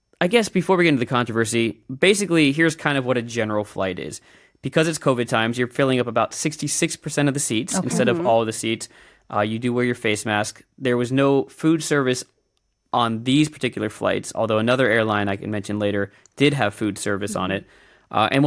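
No technical fault can be heard anywhere in this speech recording. There is no moment in the audio that calls for a timed note.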